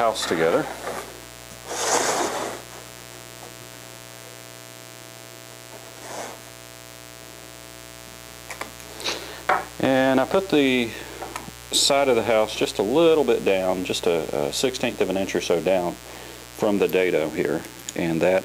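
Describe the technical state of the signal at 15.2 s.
At 15.2 s there's mains buzz running through the whole clip: 60 Hz switching spikes spray harmonics into the kilohertz range, giving a raspy hum roughly 20 dB under the sound.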